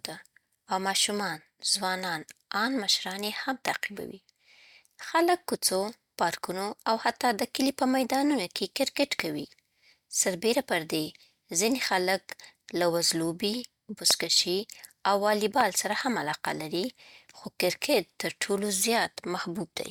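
Four loud pops interrupt the speech, at 3.68 to 3.70 s, 9.20 to 9.22 s, 14.11 to 14.13 s and 15.61 to 15.63 s. Each is a single sharp click lasting about 20 ms and peaking well above the speech level, while the talking carries on underneath. The likely cause is a brief voltage spike, such as static discharge, a switching transient or a driver glitch, entering the signal chain.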